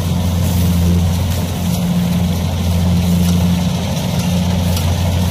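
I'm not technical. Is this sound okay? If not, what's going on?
No. The whole clip suffers from hard clipping. The sound was pushed louder than the recording chain could carry, so whenever it peaks, the tops of the waveform are sliced off flat instead of rounding over. Only a small share of the sound, roughly one moment in twenty, hits that ceiling, but each time it does, the flattened peaks add a gritty, crackling edge. It comes and goes with the loudest parts from start to finish.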